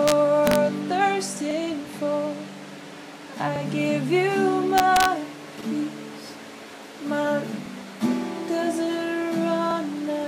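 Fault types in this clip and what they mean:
Integer overflow: Loud peaks push a sum past the integer limit, and instead of being held there the value wraps to the opposite extreme. This is heard as harsh cracks far sharper than clipping at 0.08–0.12 s, 0.47–0.56 s and 4.78–5.05 s, with overdrive up to about 2 dB.
Overlapping chunks: The audio moves through in 2-second chunks, and each one begins 50 ms before the previous one has finished. That 50 ms of sound plays twice at the join, producing a brief stutter or click near 1.51 s, 3.56 s and 9.71 s.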